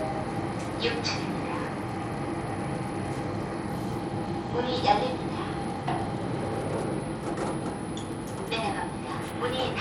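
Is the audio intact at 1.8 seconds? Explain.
No. At 1.8 seconds, as throughout, the sound carries a gritty, coarse haze and flickering, unstable treble, with nothing above about 17.1 kHz. This is likely Bluetooth SBC compression at a low bitrate, consistent with roughly 96 kbps, starving the upper sub-bands of bits.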